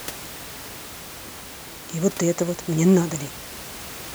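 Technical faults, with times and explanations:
Nothing in this speech points to a technical fault.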